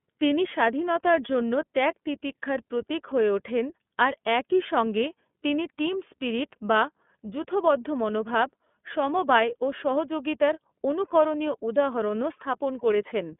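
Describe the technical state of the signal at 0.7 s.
At 0.7 s the speech carries iLBC codec damage, present from start to finish. The band is narrow, roughly 200 Hz to 3.5 kHz, with nothing above 3.7 kHz. iLBC codes each 30 ms frame's excitation on its own, without drawing on the frame before. The result is plainly audible: speech sounds dull and boxed in, with a rough, synthetic grain. The coarseness fits the 13.33 kbps mode.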